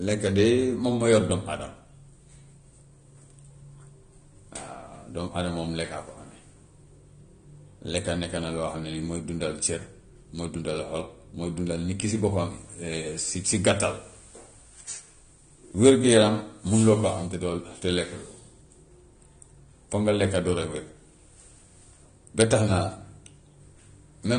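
Dull, smeared speech runs from start to finish, with nothing above about 9.7 kHz and a warbling, fizzy texture clinging to sustained sounds and sibilants. The likely cause is AAC compression: an AAC-LC encoder short of bits cuts the top of the spectrum away and quantises the remaining frequency lines so coarsely that gaps and substitute noise replace real detail. The damage is plainly audible, which fits a bitrate of around 32 kbps.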